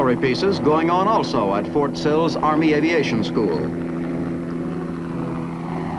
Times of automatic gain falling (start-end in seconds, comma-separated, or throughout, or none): none